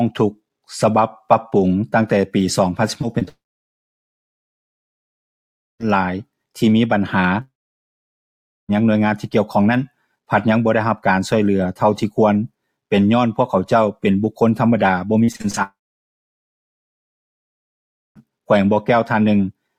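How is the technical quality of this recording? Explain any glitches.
The recording is badly damaged by network problems. Short choppy stretches lead into long silent gaps.

Repeated packet loss (robotic sound) occurs at 3.01 to 3.28 s and at 15.25 to 15.59 s. Audio packets went missing several times in quick succession. Each hole was patched by extending the last bit of sound. The first stretch has three gaps, the longest 24 ms, and about a fifth of it is concealed. The second is worse. It has six gaps, the longest 35 ms, and nearly half of it is patched. Both sound choppy.

Long network dropouts follow at 3.28 to 5.86 s, 7.41 to 8.70 s and 15.63 to 18.26 s. The audio stops for about 2.5 s, 1.3 s and 2.5 s. It briefly smears into a fading buzz, then falls to near silence for almost the whole gap. The sound resumes later, with the missing portion simply gone. A stream that stopped arriving is the likely cause each time.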